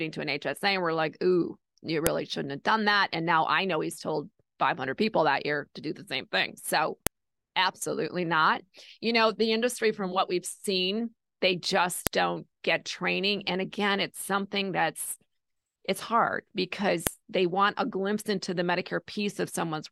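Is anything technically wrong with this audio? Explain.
Yes: file header played as audio, as sharp clicks at 2.07, 7.07 (before "absolutely not"), 12.07 and 17.07 s. Header bytes of 5-second speech pieces play as samples, so unlike signal-dependent splice clicks, they land at exactly regular intervals.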